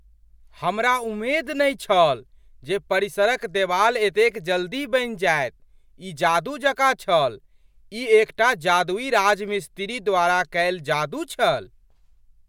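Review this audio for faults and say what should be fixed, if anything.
Nothing in this speech recording needs fixing. No technical fault can be heard at any point, so no change is called for.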